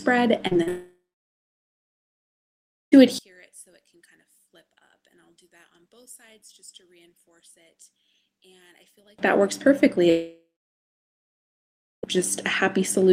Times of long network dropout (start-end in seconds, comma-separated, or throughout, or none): 0.68-2.94, 10.10-12.16